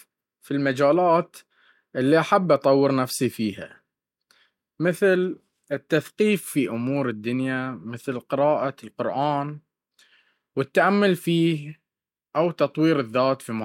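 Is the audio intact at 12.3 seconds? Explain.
Yes, the speech at 12.3 seconds plays through intact, with no dropout, click, distortion or other fault at that moment.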